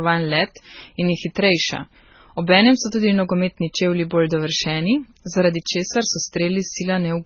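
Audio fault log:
throughout, transcoding between lossy codecs: the speech has nothing above 6.8 kHz and layered, smeared artefacts, likely a low-rate MP3 stage re-encoded as Opus.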